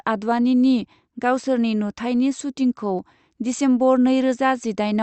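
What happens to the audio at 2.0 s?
Nothing goes wrong at 2.0 s: the speech carries on intact through that moment, with no dropout, glitch or distortion at that point.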